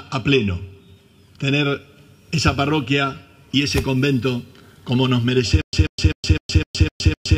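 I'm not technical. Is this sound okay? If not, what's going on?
No. From about 5.62 s to the very end there's a stutter with silent gaps: a short 0.14-second snippet repeats seven times, each followed by about 0.12 seconds of dead silence. Most likely the playback stalled and kept replaying its last fragment, so the real audio there is lost.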